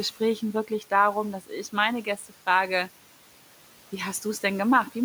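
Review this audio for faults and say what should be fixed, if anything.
Between 2.04 and 2.32 s a stretch of the speech goes briefly faint and swallowed, dipping by about 10 dB at its deepest, with roughly 0.15 s of sound pulled down in total. This is speech cut by the noise suppressor: it mistook these quieter speech components for the room noise, which sits about 21 dB below the speech, and attenuated them along with it. Making the suppressor less aggressive, so it holds back gain whenever low-level speech is present, would prevent this.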